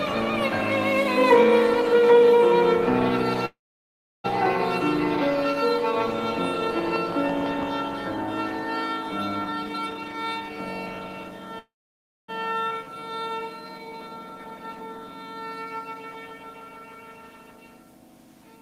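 Call audio freeze at 3.45 to 4.26 s: the sound stops and a brief tail fades into about 0.69 s of silence before playback resumes where it left off. The likely cause is packets held up in transit, leaving the jitter buffer empty so the receiver could only stretch the last sound out. Nothing is lost, but about 0.79 s of extra delay is inserted into the stream.

Jitter buffer speed-up from 9.45 to 11.54 s: the audio runs at roughly 136% of normal pace with its pitch unchanged, so this stretch sounds rushed. The buffer held more than its target, and the receiver trimmed it by cutting many short pitch-period-sized pieces in succession, removing about 0.7 s in total.

Call audio freeze again at 11.59 to 12.30 s, with the same pattern: a short fading continuation, then about 0.59 s of silence, with playback picking up exactly where it stopped. This adds about 0.70 s of delay with nothing missing.

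Skip ahead at 12.70 s: playback jumps forward almost seamlessly, and roughly a third of a second of audio is simply absent, with the material on either side joined nearly directly. A stretch of audio was discarded while later audio was already queued, either lost on the way or dropped when the buffer overflowed. This pulls the delay back down by about the same amount.

Jitter buffer slow-down from 12.84 to 15.48 s: the pace drops to about 88% with the pitch held, so sounds are drawn out and there may be a faint warble. The buffer was running short, or had just raised its target delay, so the receiver repeated single pitch periods and pieces of pauses over and over to rebuild a reserve, adding about 0.32 s.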